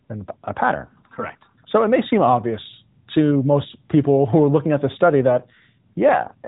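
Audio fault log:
5.30–6.48 s, AMR rate drop: after "looking at this study" the link pushes the AMR-NB coder down, consistent with 12.2 falling to 5.9 kbps. Fewer bits per frame make the speech buzzier and more synthetic, with no gap or bandwidth change.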